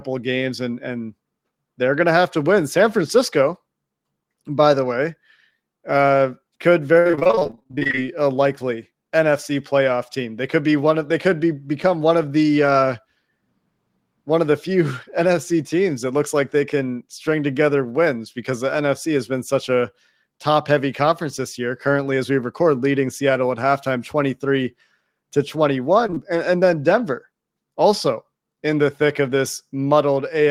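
Repeated packet loss, heard as robotic sound, runs from 6.99 to 7.99 s in this speech recording, between "uh could" and "a likely". Within that second, audio keeps failing to arrive in a couple of dozen short holes, the longest 58 ms. Each is patched by extending the preceding sound, so about half the stretch is synthetic fill and the speech turns choppy. Short concealed packet loss follows at 26.07, 26.10 and 26.14 s, three back-to-back 20 ms dropouts ending near 26.18 s. The decoder bridged each by continuing the last sound before blending back, leaving a quick smear or wobble.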